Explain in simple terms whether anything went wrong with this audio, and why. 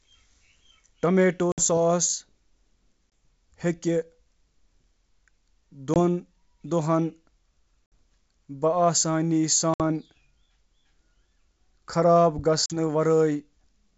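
Yes, something went wrong. This speech has packet loss on an ADPCM call. Short chunks vanished into sudden silence at 1.52–1.64, 3.11, 5.94–5.97, 7.86–7.95, 9.74–9.81 and 12.66–12.77 s. The decoder then lost track of the speech's level, so each gap ends with a click or a brief wobble.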